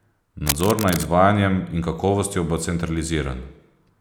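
From 0.46 to 1.05 s, cable scratch noise: a worn connector likely shifted, its contact resistance fluttering and adding uneven rustling bursts just below the speech level.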